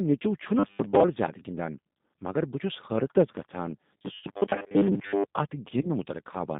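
The whole speech clip has passed through a G.729 codec at 8 kbit/s, and the damage is plainly audible. The line is confined to roughly 150 Hz to 3.7 kHz, so the sound is thin and boxy. Because each 10 ms frame is rebuilt from a filter, a pitch predictor and a handful of pulses, there is a slightly rough, synthetic grain throughout. That steady coding texture is not the same as the episodes of rigid buzz that follow.

From 0.59 to 1.03 s, just before "زیادٕ گندان مگر", and again from 3.97 to 5.24 s, just after "چھس حیرتس گژھان", the sound turns into a robotic sound from repeated short buffers. The likely cause is a player starved of new audio, looping the last 10 ms or so and skipping most of the real signal. This imposes a fixed 100 Hz buzz that ignores the natural pitch. The result is mechanical and metallic, and it still tracks the syllables loosely.

Inside the second stretch, at 4.19 to 4.26 s, there is VoIP packet loss concealed by the speech codec. 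About 40 ms of audio is missing, which fits two lost packets. A shorter gap of about 20 ms follows at 5.81 to 5.91 s. Here the decoder extends its last pitch and filter into a sound that fades and is slow to recover. Unlike the looping buzz, this sound decays rather than holding a constant pitch.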